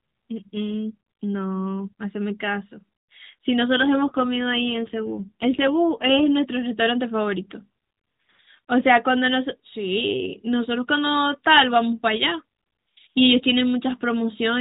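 From 3.76 to 6.29 s an AMR rate drop roughens the speech into a buzzier, more synthetic tone, consistent with the codec stepping down from 12.2 to about 5.9 kbps. The spectrogram keeps its 4 kHz ceiling with no waveform gap, but harmonics smear.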